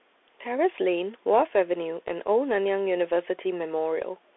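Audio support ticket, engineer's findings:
Bluetooth CVSD headset codec, throughout. Narrowband speech, dull and boxy; s sounds scratchy, granular hiss beneath. Spectrogram: energy confined to roughly 300 Hz–3.5 kHz, hard ceiling near 3.9 kHz, empty above. Waveform: steep loud transients rounded where the 1-bit delta step can't keep up (slope overload). Band and grain fit 64 kbps CVSD on a headset link.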